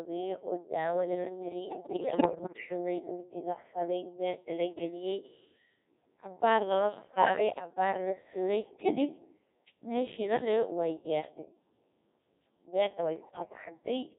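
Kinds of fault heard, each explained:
Codec 2 vocoder: the whole clip is resynthesised from pitch, voicing, level and a spectral envelope rather than the original waveform, leaving speech heavily buzzy and robotic throughout. This synthetic tone, not a muffled lowpass, fits the 1.6 kbit/s mode.
Bit errors on digital voice radio: corrupted bits scramble the pitch, level and tone colour of whole frames at 1.64–2.66 s, 7.08–7.50 s and 13.16–13.57 s, giving bleeps and warbling gibberish. Unlike packet loss, the sound keeps going, and the first burst is the most severe.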